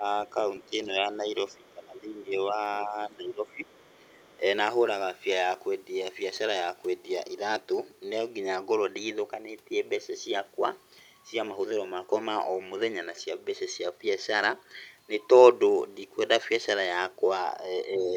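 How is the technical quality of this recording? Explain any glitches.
The recording has echo-control problems in the first few seconds and at the very end.

Speech suppressed in double talk, 0.00–0.04 s, 0.70–4.40 s and 17.94–18.15 s: the voice dips by up to about 15 dB, likely because the echo canceller turned down both talkers at once.

Other side's voice leaking through, at 0.61–0.66, 1.55–1.72, 3.70–4.37 and 18.01–18.15 s: a faint second voice, roughly 25 to 40 dB below the speech, likely residual loudspeaker echo that was not fully cancelled.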